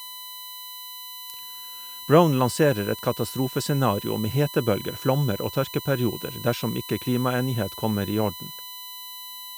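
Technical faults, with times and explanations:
Throughout, USB whine: a steady 1 kHz tone with its 4 kHz harmonic loudest, sitting about 15 dB under the speech, from bus current leaking into the ground.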